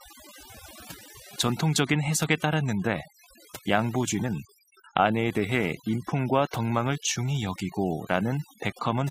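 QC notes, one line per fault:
Throughout: overdone noise removal. Bands near the noise floor are pulled down hard, taking quiet speech detail with them, leaving speech over near-silence with twinkling specks.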